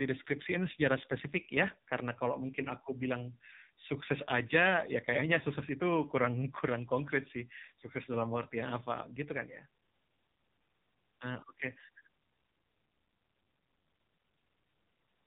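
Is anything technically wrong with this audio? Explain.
Yes. The speech has been through the AMR narrowband mobile codec, and the damage is heavy. It runs through the whole clip. This codec samples at 8 kHz, so nothing above 4 kHz survives. It rebuilds the voice from a vocal tract model fed by a few pulses per 5 ms subframe. Here the voice sounds buzzy, thin and synthetic. That fits one of the lowest AMR-NB modes, around 5.9 kbps.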